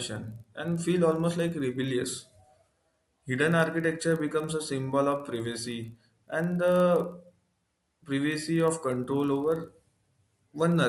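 Resampler restarted on every block, throughout this speech clip: each 40 ms block appears to be converted alone, likely from 24 kHz to 48 kHz, so its edges lack true neighbouring samples. The resulting edge errors form a 25 Hz buzz, audible only while speech is present.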